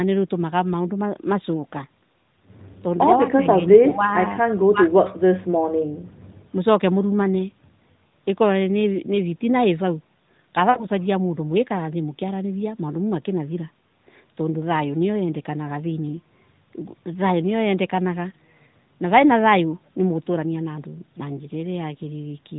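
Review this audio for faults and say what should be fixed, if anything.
Lost AMR speech frames occur at 3.90–3.95 s and 10.70–10.86 s in this narrowband speech. The first is a brief 20 ms dip or warble. The second lasts about 160 ms and is heard as a drawn-out, fading smear, consistent with a run of three consecutive 20 ms frames. In each case the decoder received corrupted frames and filled the gap by repeating the last good pitch and vocal-tract parameters at decreasing gain. The surrounding audio carries light AMR-NB coding, roughly consistent with 12.2 kbps. To prevent this, improve radio link quality or error protection on the transport so frames arrive intact.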